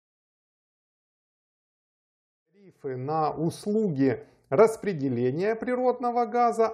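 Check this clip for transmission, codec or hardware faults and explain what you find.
Nothing here points to a transmission, codec or hardware problem; the only change in level is a gentle fade-in from around two and a half seconds up to about 3.5 s, smooth and free of clicks, just as an editor would shape it.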